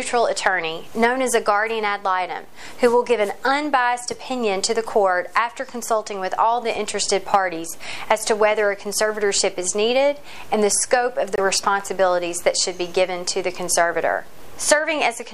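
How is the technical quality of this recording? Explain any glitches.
There is one short gap in the recording. From 11.36 to 11.39 s the sound cuts to silence: a Bluetooth dropout, likely from one frame's packets (about 23 ms of audio) missing the headphones' deadline and being discarded. Unlike a stall, playback resumes further along, as if it had continued through the gap.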